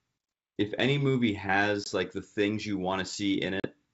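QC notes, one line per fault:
1.84–1.88 s and 3.60–3.67 s, packet loss on an ADPCM call: hard-edged holes of about 20 ms and 40 ms, pointing to a couple of packets and then around four lost. The G.722 decoder's predictor and step size drift from the sender's, so the speech returns with brief distortion before settling.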